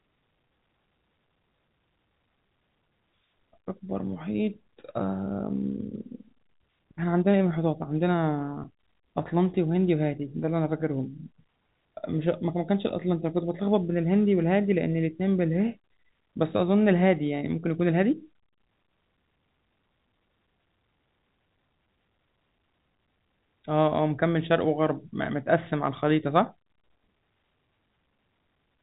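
No technical faults are audible in the speech, which carries the narrow band of G.711 telephone coding, with nothing above about 3.8 kHz.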